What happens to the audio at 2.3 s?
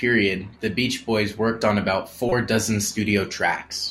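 A short blip of noise cuts in from 2.29 to 2.32 s, just after "worked on about", peaking fairly loud at around -10 dBFS. This is a corrupt frame decoded: bits inside a single compressed frame were flipped, yet the decoder played it anyway. The misread gains and codes scatter energy into the wrong frequencies for roughly 30 ms, the length of that one damaged frame, producing the brief burst before the sound resumes.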